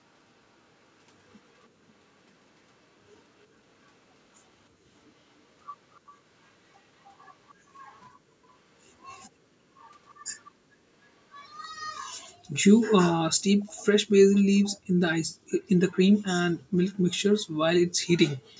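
An echo canceller on the far end of the call, likely one whose loudspeaker was feeding its own microphone, let residual sound slip back, producing echo leak at 1.59, 5.94, 7.04, 10.45, 13.63 and 14.33 s. Each time, a copy of the speech returns about 0.3 s late. The early scraps are the quietest, later ones grow stronger, and the final one, lasting nearly half a second, is the clearest.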